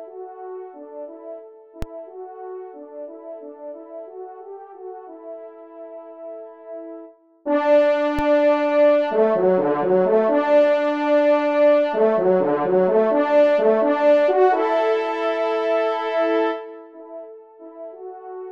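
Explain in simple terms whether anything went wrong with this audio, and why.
Two DC steps occur, at 1.82 s and 8.19 s. The waveform's zero line suddenly jumps, causing a low thump, then gently drifts back.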